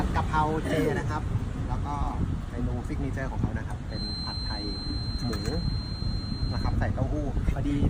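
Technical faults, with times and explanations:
3.87–6.79 s, feedback whistle: a thin, steady tone near 4.1 kHz hangs behind the sound, roughly 10 dB beneath it and swelling and fading slowly in level. It is likely a loudspeaker-to-microphone loop poised at the edge of feedback, sustaining that one frequency without building.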